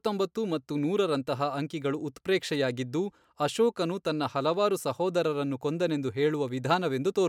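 No technical faults are audible anywhere in the speech recording.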